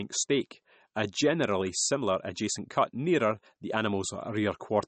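Throughout the speech, the band stops sharply at 8.4 kHz, and the sibilants carry a watery, swirling edge with smeared onsets. That is plainly audible MP3 compression, likely from a low bitrate, around 37 kbps, starving the encoder so that weak spectral lines flicker between frames.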